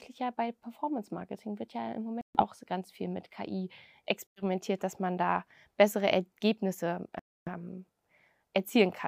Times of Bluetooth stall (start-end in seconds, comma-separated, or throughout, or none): 2.21-2.41, 4.27-4.42, 7.19-7.49